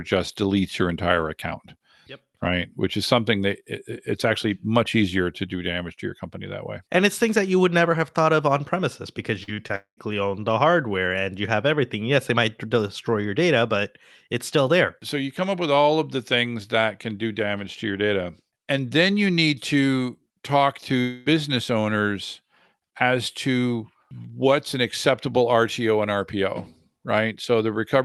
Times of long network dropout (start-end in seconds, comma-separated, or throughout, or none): 9.76-9.99, 21.01-21.28